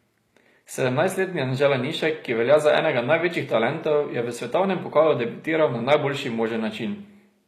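A speech clip, and the whole thing carries what sounds like HE-AAC compression, likely from a low-bitrate encode around 24 kbps. The treble is rebuilt rather than real, so s sounds come out gritty and metallic, and nothing reaches above 14.9 kHz.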